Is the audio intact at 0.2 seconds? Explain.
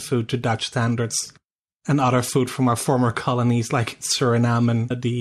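No. MP2 compression runs through the whole speech clip, including 0.2 s. The sound is dull, with a gurgling, granular grit. The likely cause is MPEG Layer II coding starving its sub-bands of bits, so upper bands drop out and the rest are coarsely quantised. This fits a low rate near 80 kbps.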